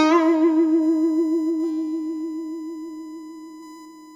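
A music clip carrying USB whine for its whole length: a steady, fixed-pitch tone at 1 kHz sits under the music, strongest at that fundamental and roughly 25 dB below the programme level. The 1 kHz pitch matches the 1 ms frame rate of a USB bus, whose pulsed current draw is leaking into the audio path through shared power or ground. Better isolation or grounding at the interface would remove it.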